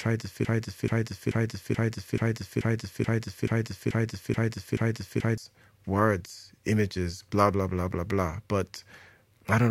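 A broken-record loop runs from 0.45 to 5.38 s: a 0.43 s fragment of the speech repeats exactly, back to back, eleven times. The likely cause is a stalled player or stream resending its last buffered piece, so the intervening speech is lost.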